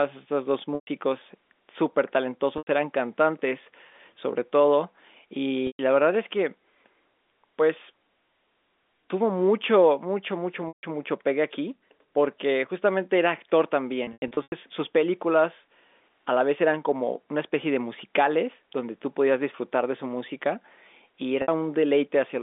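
Packet loss with pitch repetition shows up six times: 0.75 to 0.87 s, 2.58 to 2.67, 5.67 to 5.79, 10.68 to 10.83, a scattered stretch from 14.04 to 14.52, and 21.42 to 21.48. Each gap, 60 to 150 ms, fits lost 30 ms packets. The receiver loops the last pitch period, so the speech briefly holds on a buzzy tone, fading before it cross-fades back. The telephone-band G.711 coding underneath stays clean.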